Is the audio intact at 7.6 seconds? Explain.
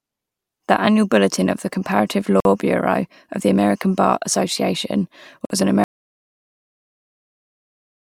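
No. An audio dropout to silence begins at 5.84 s, just after "was an", and lasts to the end of the clip, about 2.24 s in all, so 7.6 s falls inside it. The likely cause is a lost input, such as a disconnected device, a failed link or an accidental mute, while recording carried on writing silence. The speech stops abruptly mid-flow and is followed by dead silence with no room tone, and whatever was said in that stretch is gone.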